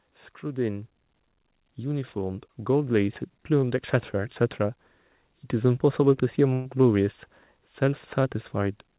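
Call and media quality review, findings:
Level creep, 1.75 to 4.42 s: speech and background noise swell together by about 8 dB over roughly 2.7 s. Automatic gain rising. The AGC judged the input too quiet and ramped its gain gradually, lifting the noise floor along with the voice.

Dropout at 6.53 to 6.68 s: a short held, fading tail of the preceding sound, then speech resumes with about 120 ms missing. Burst of packet loss in the jitter buffer. Concealment extended the last audio and attenuated it across the gap. Narrowband call path, nothing above 4 kHz, consistent with G.711 A-law.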